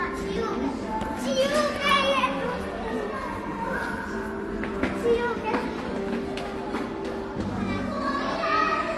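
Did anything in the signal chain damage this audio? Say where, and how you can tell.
Yes, at the codec stage, throughout the clip. Nothing is present above about 12.1 kHz, and two distinct kinds of compression damage sit on top of each other, heard together. This layering points to transcoding between lossy codecs, likely a low-rate HE-AAC encode, around 32 kbit/s, later re-encoded as AAC-LC near 48 kbit/s. The second encoder wasted bits preserving the first one's errors and added its own. A single low-bitrate encode would show one consistent artefact character, not two.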